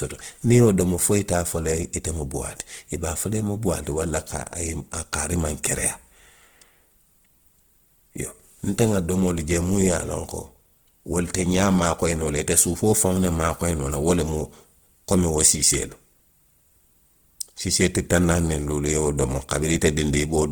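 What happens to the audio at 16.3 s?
At 16.3 s the speech sounds rough and grainy, with a noisy, hissy texture over it rather than swirling or watery gaps, while the top end still reaches about 20.1 kHz. This is Opus compression, most likely in its music (CELT) mode at a low rate, which fits a bitrate around 16 kbps. The encoder keeps each band's energy but fills starved bands with folded or noise content, and that substitution is plainly audible throughout the clip, including this moment.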